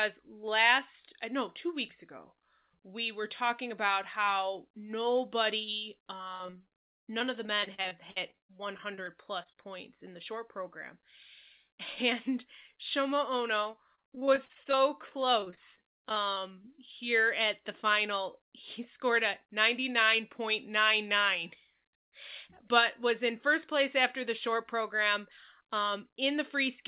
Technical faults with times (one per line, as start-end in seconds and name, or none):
6.28-9.70 repeated packet loss (robotic sound)
13.64-16.80 repeated packet loss (robotic sound)
23.30-25.02 jitter buffer speed-up